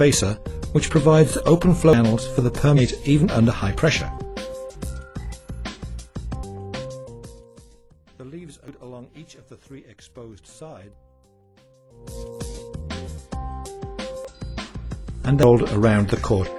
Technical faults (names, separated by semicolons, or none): audio missing between chunks; damaged data in a compressed stream; zipper noise